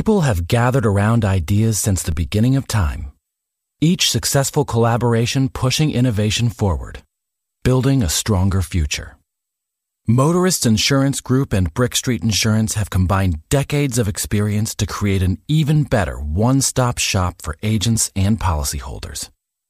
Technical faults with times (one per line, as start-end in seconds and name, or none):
2.12 DC step